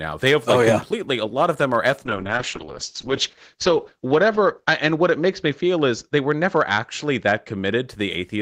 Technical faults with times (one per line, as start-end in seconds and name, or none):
0.00-8.42 hard clipping
2.06-7.93 call bitrate drop